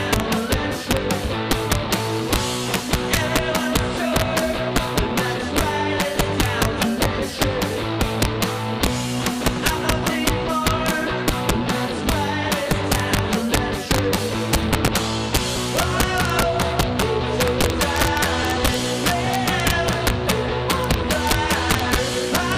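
It's a clip with integer overflow running right through it: the gain pushed peaks about 4 dB past the integer limit, and instead of clamping they wrapped to the opposite sign. Roughly one or two percent of samples flip, so peaks crack rather than softly clip.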